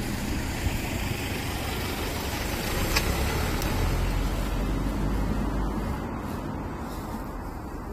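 An everyday-sound recording with chunks out of order between 3.6 and 3.72 s. One 60 ms chunk arrives a single chunk late, so the two 60 ms pieces in that span play swapped. No audio is lost, but the moment sounds briefly jumbled, with three hard joins. On a spectrogram those joins show as thin vertical broadband lines, and the waveform shows abrupt steps where the swapped pieces meet their neighbours.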